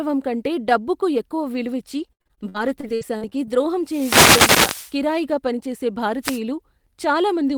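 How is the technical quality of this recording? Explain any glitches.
The speech has two problems: a choppy, robotic patch early on and a couple of bursts of radio static later.

From 1.99 to 3.49 s, right after "కంటే డబ్బుకు ఎక్కువ విలువిచ్చి", there's repeated packet loss (robotic sound). Around a dozen short holes, the longest about 70 ms, got papered over by stretching the last bit of sound, roughly a quarter of that span. That's why it turns choppy and stuttery.

There are two wireless microphone noise hits. One runs from 3.84 to 4.97 s, just before "కిరాయిగా పనిచేసే", and a shorter one sits at 6.22 to 6.40 s, just after those same words. The FM radio link faded as reflections cancelled, so receiver hiss swelled up into a swishy burst of static over the voice.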